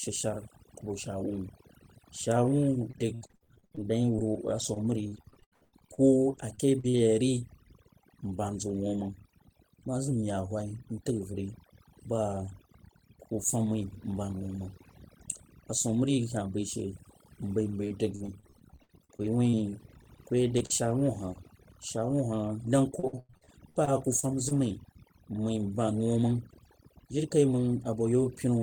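Overdone noise removal runs through the whole recording. Bands sitting near the noise estimate are pulled almost to nothing, so the background drops and breaks up into twinkling specks. Unlike plain low-pass muffling, the damage flickers band by band.

Repeated packet loss (robotic sound) comes in three bursts: 2.91 to 6.96 s, 17.66 to 21.12 s and 22.99 to 24.53 s. Holes up to about 95 ms are patched by stretching the preceding sound, giving a choppy sound with pieces missing. Unlike a single dropout, the gaps keep recurring.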